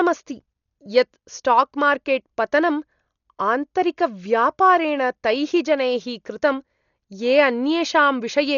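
Throughout the speech, nothing sounds above 7 kHz. Dull, with rough fluttering noise. Likely heavy Dolby Digital compression, fitting a very low bitrate around 40 kbps.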